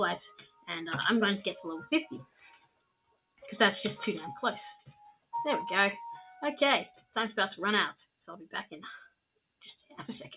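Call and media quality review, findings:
Level pumps and flutters across the whole clip: sustained sound and tails sink while attacks pass, with a swing of around 15 dB. Probable component is a noise suppressor tuned for speech, left on for music or sounds. It treats steady tones and ambience as noise. Top end stops near 4 kHz, consistent with a G.711 mu-law call path.

Sound cut by the noise suppressor at 0.34–0.69, 2.23–3.43, 4.79–5.33, 6.92–7.16 and 9.04–9.95 s. Held and decaying stretches drop out, by about 19 dB at worst (2.23 and 9.04 s) and about 14–18 dB elsewhere. The suppressor classed them as noise and cut their gain.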